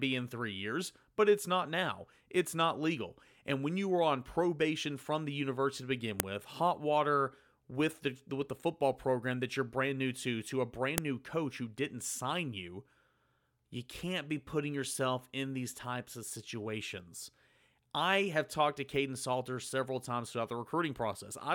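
A speech clip with two sharp, loud clicks. The first lands at 6.2 s, right after "the university to begin" and before "with hot water with". The second hits at 10.98 s, between "new to to a" and "new coach who didn't". Both are a file header played as audio. Separate WAV pieces were joined with their headers left in. Those header bytes play back as a burst of raw samples, so each join snaps regardless of the speech around it.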